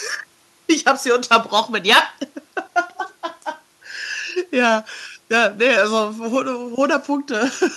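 The speech signal shows no technical faults, with only the room's own background noise sitting about 42 dB below it as part of the recording.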